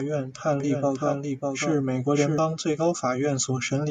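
A speech clip with a doubled audio track: most likely a second, slower capture path or an edit left two copies of the same audio running out of step. From 0.6 s, just after "院判", to 2.38 s, before "最高", a full-band copy trails the original by about 0.7 s at roughly 5 dB lower. Because it has no decay or room colour, it sounds like a clean second layer rather than an echo, and it cuts in and out abruptly at both ends.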